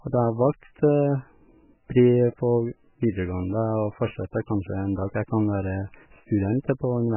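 Throughout the speech, nothing above 3 kHz survives, and heavy swirling, watery artefacts smear the attacks. This is likely MP3 compression at a very low bitrate, near 8 kbps, where the encoder cuts the treble and drops weak frequency lines that flicker between frames.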